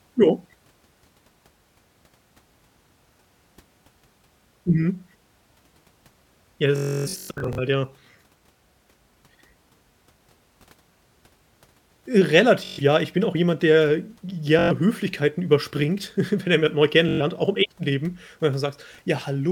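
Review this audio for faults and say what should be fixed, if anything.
Bluetooth stutter at 6.76–7.59 s (worst, 0.3 s buzz), 12.65–12.80, 14.59–14.71, and 17.09–17.21 s between "wenn er jemand neu" and "auch im echten". Lost packets made the receiver loop its last buffer, then jump ahead. Record over a wired link, or keep the Bluetooth devices close and clear of interference.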